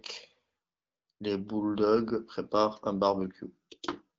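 No technical faults can be heard in this speech.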